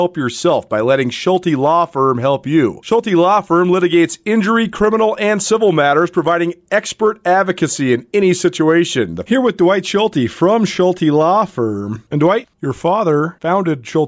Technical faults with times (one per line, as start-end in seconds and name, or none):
none